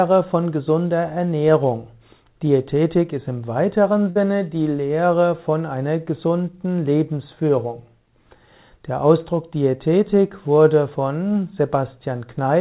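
At 4.1 s a burst of packet loss interrupts the stream: a short run of packets never arrived in time, so the receiver papered over the hole by repeating the last sound for about 53 ms while fading it down. Until 4.17 s you hear that held, dimming tail, a brief smeared sustain, and then the audio picks up about 60 ms later than where it stopped, skipping that stretch. The band-limited sound, with nothing above 4 kHz, fits G.711 mu-law narrowband coding.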